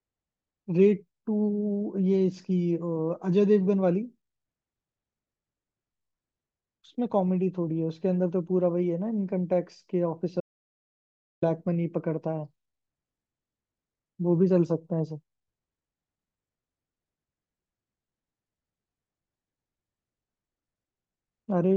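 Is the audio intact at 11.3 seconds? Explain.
No. At 11.3 seconds the speech is in an audio dropout to silence running from 10.41 to 11.42 s, about 1.02 s of silence with no room tone, likely from input lost while recording continued. The waveform shows a flat line, the spectrogram a fully blank column.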